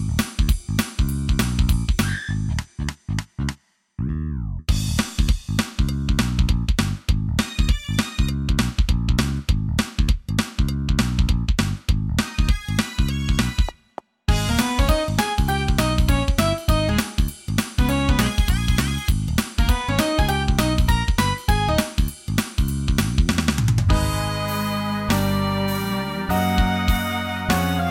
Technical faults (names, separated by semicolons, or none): none